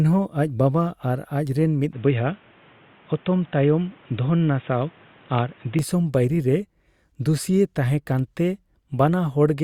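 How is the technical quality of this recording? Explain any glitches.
The recording has one clear glitch, a stretch where the sound changes character abruptly. Input switched to a poorer device, from 1.93 s to 5.79 s: the speech suddenly loses everything above 3.8 kHz and turns dull and boxy, with fresh background noise roughly 30 dB below the voice, then opens up again at 5.79 s. The likely cause is the system swapping to a narrower-band microphone or a headset's call profile mid-recording. The handover is seamless, with no gap and no real change in loudness.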